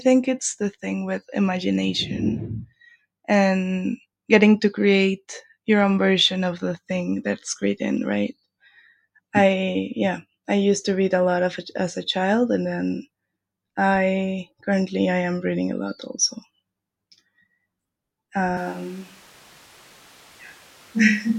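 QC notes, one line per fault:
18.57 s to end: switch to a distant microphone. The speech suddenly turns roomy and hollow, about 5 dB quieter, with room noise roughly 30 dB below it, likely because the close mic dropped out. The waveform steps down, and the spectrogram shows thinner lows and a raised noise floor.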